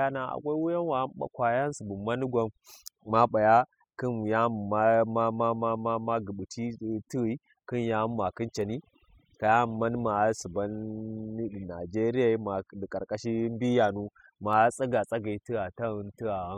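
Overdone noise removal runs through the whole of this speech recording. A noise reduction stage set far too aggressively is cutting individual frequency bands down or out whenever they sit close to its noise estimate, and it takes the quieter parts of the voice along with the noise. The gaps between phrases fall to near silence flecked with twinkling specks.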